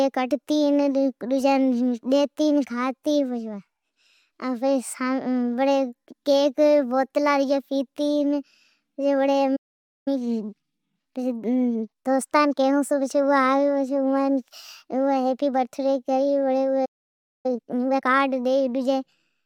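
At 9.56 s the speech cuts to silence for about 0.5 s, a playback stall, likely from the player running short of data. From 10.08 to 13.08 s, time-compressed catch-up runs it 1.15 times fast, hurried but at normal pitch. A second stall silences it from 16.85 to 17.46 s. Catch-up follows at double speed until 18.04 s, sounding rushed but at normal pitch.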